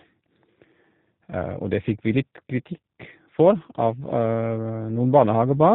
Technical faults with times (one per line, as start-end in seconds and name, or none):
0.00-5.75 G.729 codec